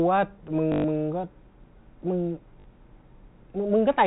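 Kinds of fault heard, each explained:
Packet loss with last packet repeated: incoming audio stopped arriving, and the receiver filled each gap by replaying its most recent packet until new data resumed. This happens twice, for 120 ms from 0.72 to 0.84 s and for 40 ms from 2.60 to 2.64 s. The longer run becomes a brief robotic buzz near 50 Hz, which fits 20 ms packets.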